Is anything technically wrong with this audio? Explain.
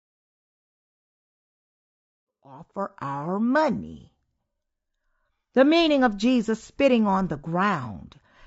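Yes. Throughout the speech there is plainly audible low-delay AAC compression, likely AAC-ELD at a bitrate that fits about 32 kbps. Its short frames smear pitch harmonics, leaving a rough, grainy tone with noise between harmonics. The smooth fade-in from about 2.5 s to 3.18 s carries the same texture.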